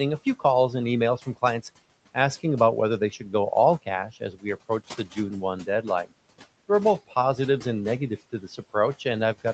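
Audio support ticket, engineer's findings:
Speech cut by the noise suppressor, 4.13–4.45 s, between "they should go all" and "approach the". Dips about 14 dB for around 150 ms. Suppressor misread speech as noise.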